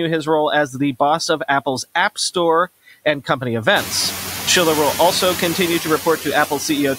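Noise suppressor artifacts run through the whole clip. The suppressor works frame by frame. It pulls down each frequency band it judges to be steady noise, by about 7 dB here. So the background dips in the gaps between words and comes back up beneath the speech. The floor keeps pumping with the talking. Around four seconds in, the room noise climbs by about 16 dB, to about 10 dB below the speech, and the pumping grows easier to hear.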